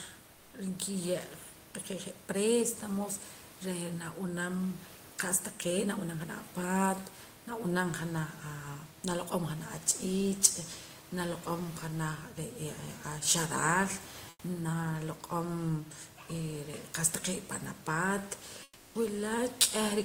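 At 0.33–0.53, 14.29–14.43 and 18.63–18.95 s, comfort noise replaces the room background with steady, featureless hiss about 2, 6 and 7 dB quieter, likely from discontinuous transmission. A spectrogram shows smooth, detail-free bands. From 19.61 to 19.63 s, microphone overload drives peaks about 6 dB past the converter limit, likely from excessive input gain. This adds a brief harsh crackle, and the waveform shows flat-topped, squared-off peaks.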